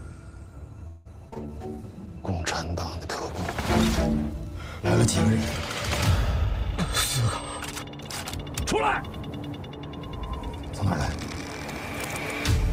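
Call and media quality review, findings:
Call audio freeze, 0.87 to 1.07 s: the last sound is stretched into a fading buzz for about 180 ms, after which the audio resumes where it stopped, with nothing lost. This is likely a jitter buffer underrun from late-held packets, which adds 180 ms of delay. On a spectrogram, frozen, smeared harmonics decay across the gap; on the waveform, the envelope tapers without reaching digital silence.

Short concealed packet loss, 1.29 to 1.34 s and 1.34 to 1.38 s: two brief back-to-back smears, each about 20 ms of audio that never reached the decoder. The decoder's loss concealment extrapolates from the preceding pitch or shaped noise, then cross-fades into the real frames. On a spectrogram, a short blurred patch with softened onsets; on the waveform, a smooth blend back into the real audio at each join.

Call bitrate drop, 1.37 to 3.62 s: the audio turns rough and muffled. 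The bandwidth estimate fell, and the Opus encoder was cut from 32 to 13 kbps, holding at the lowest rate for about 2.2 s. Coarser quantisation plus bandwidth reduction at that rate. On a spectrogram, the upper band goes abruptly empty above a lowered cutoff, with blotchy, smeared texture below it, until it restores after 3.6 s.

Jitter buffer speed-up, 6.45 to 7.86 s: playback runs about 4% fast at unchanged pitch. The buffer was overfilled, so the receiver repeatedly dropped pitch-period-sized pieces, roughly 70 ms in total, to cut latency. On the waveform, periodic cycles are missing at splice points; on a spectrogram, events are compressed in time with harmonic spacing intact.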